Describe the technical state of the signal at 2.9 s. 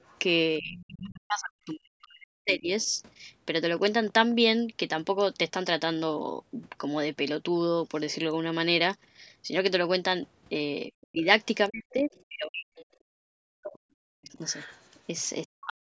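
At 2.9 s the signal sits at the tail of speech suppressed in double talk, spanning 0.59 to 2.9 s. With both ends talking at once, the echo canceller likely failed to tell the local talker from the loudspeaker echo and turned both down. The speech dips and breaks up, at its deepest by around 40 dB, for roughly two seconds in all.

Overlapping that end, from 2.82 to 2.91 s, comes the other side's voice leaking through, likely because the canceller left some of the loudspeaker playback in the microphone signal. It is a brief, faint scrap, around 35 dB below the talker.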